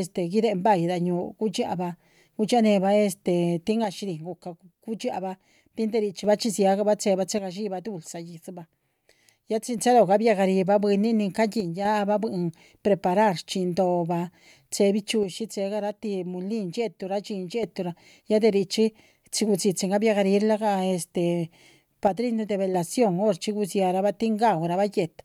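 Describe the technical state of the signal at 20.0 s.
At 20.0 s the speech signal is intact, with no audible fault at that moment.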